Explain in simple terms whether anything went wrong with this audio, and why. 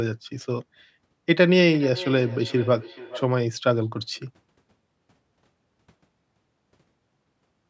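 Between 1.71 and 3.35 seconds there is a feedback echo between two devices. The sound comes back roughly every 0.4 seconds, fairly quietly and growing thinner each time, because a second device nearby replays it into the microphone. Room reverberation would blur the sound rather than repeat it at a steady beat.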